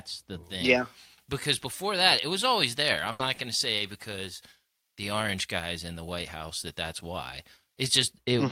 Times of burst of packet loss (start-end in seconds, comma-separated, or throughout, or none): 3.11-3.21